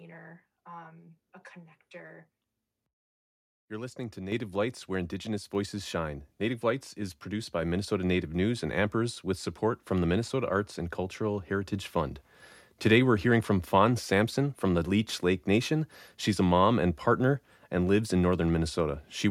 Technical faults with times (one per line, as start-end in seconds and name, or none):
4.32 microphone volume stepped up
7.62 microphone volume stepped up
11.73 microphone volume stepped up